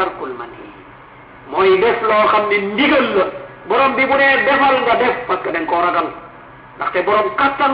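No technical faults can be heard anywhere in the clip. Nothing in the audio calls for a timestamp or an explanation of something having gone wrong.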